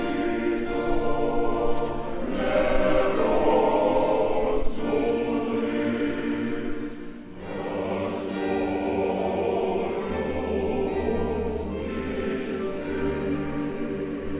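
No technical faults can be heard anywhere in the audio.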